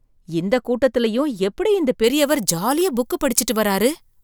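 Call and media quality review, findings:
Pre-emphasis left on, from 2.04 s to end, after "இந்த கூட்டத்துலயும் எப்படி இந்த". Thin, bright, sibilant; treble about 14 dB up at 10 kHz re 1 kHz, fits a 75 µs FM curve. De-emphasis stage likely bypassed. Unlike bass loss, the lows remain intact and the boost climbs steadily with frequency.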